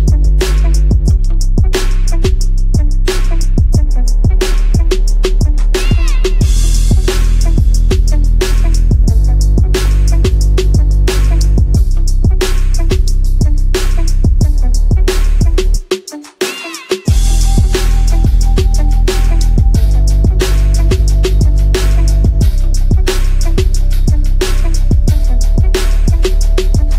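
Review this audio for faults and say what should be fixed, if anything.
No faults can be heard in this audio, so nothing needs fixing. There are no dropouts, clicks, distortion or timing problems to correct anywhere in the recording.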